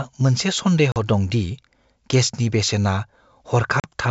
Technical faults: packet loss on an ADPCM call

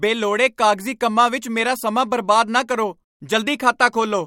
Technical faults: none

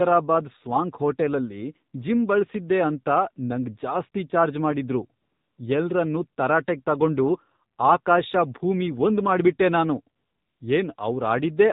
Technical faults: AMR narrowband mobile codec; AMR comfort noise

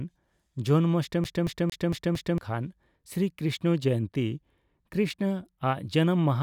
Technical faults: CD stuck on one turn

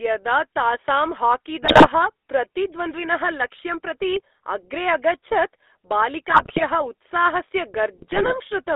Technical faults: GSM full-rate codec; GSM bit errors

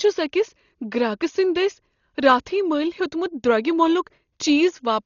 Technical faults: Dolby Digital compression

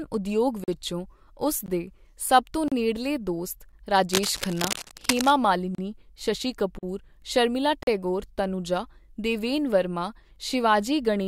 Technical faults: gap between stream segments; cable scratch noise

